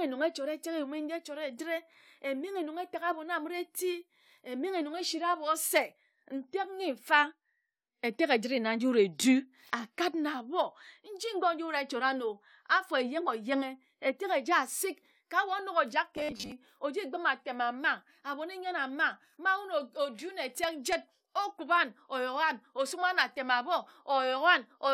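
From 16.17 s to 16.52 s the speech takes on robotic sound from repeated short buffers: a rigid, metallic buzz at 100 Hz that loosely tracks the words. This likely comes from late audio being replaced by repeats of a 10 ms buffer, with about half the real signal skipped.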